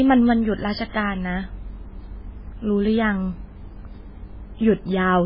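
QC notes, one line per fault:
throughout: MP3 compression. The speech has nothing above 5.3 kHz and heavy, watery degradation, likely from MP3 encoding at a bitrate that fits about 16 kbps. Starved of bits, the encoder cuts the treble and drops weak frequency lines from frame to frame.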